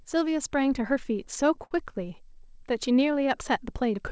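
From 1.16 to 1.72 s, repeated stalls (stutter): the jitter buffer ran dry six times, with the last sound extended across each gap of up to 54 ms, so the speech drags and judders.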